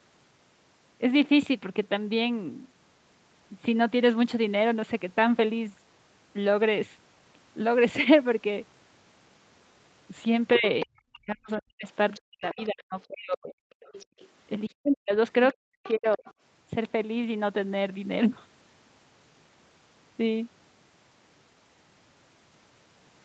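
From 10.54 to 10.86 s, the other side's voice leaks through, fairly strong at roughly 10 dB below the speech. It recurs more faintly at 11.57 s, from 12.14 to 13.05 s, from 13.83 to 14.28 s and from 15.52 to 16.33 s. Residual loudspeaker echo that the canceller likely failed to subtract is heard as a second voice under the talker.

Speech is suppressed in double talk from 10.58 to 13.63 s and again from 14.68 to 16.28 s. The talker's voice sinks by as much as roughly 40 dB in patches, likely because the canceller, unable to separate near talker from echo, attenuates both.

From 14.06 to 14.18 s, the background is gated by the echo canceller, which clamps the microphone hard while the loudspeaker plays. The room tone drops by about 36 dB for roughly a tenth of a second, then returns.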